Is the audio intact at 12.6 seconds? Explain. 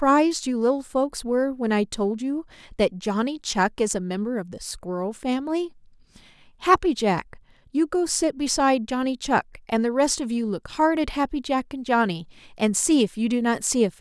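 Yes, the speech at 12.6 seconds plays through cleanly, with no fault audible at that moment.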